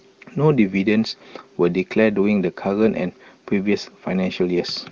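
No technical faults can be heard in the speech, which comes through AMR wideband (HD Voice) coding at 23.85 kbit/s with no more than faint damage from the codec.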